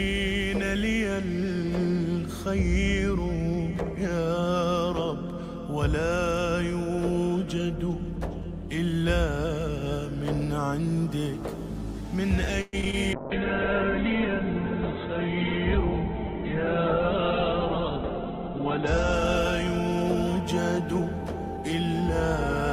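From 12.61 to 12.95 s, repeated packet loss chops the sound into a robotic stutter: four gaps, the longest 116 ms, each patched by stretching the last fragment, unlike a single clean dropout.

A call bitrate drop follows at 13.15 s and lasts until 21.20 s. The audio turns watery and muffled as the bandwidth falls from 20 kHz to 4 kHz, consistent with the encoder dropping to around 7 kbps. This is steady coarsening, not choppy gaps.

From 20.35 to 22.03 s, a jitter buffer speed-up plays the audio about 3% fast at unchanged pitch, trimming roughly 50 ms in total. The result runs slightly faster, not higher.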